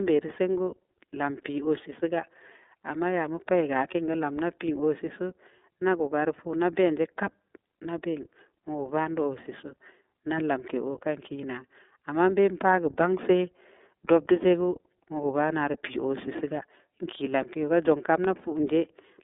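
Throughout the speech, the sound carries iLBC codec damage: the line band runs roughly 250 Hz to 3.6 kHz, and each frame's excitation is coded independently, which fits 30 ms frames at about 13 kbps, leaving a plainly rough, synthetic texture.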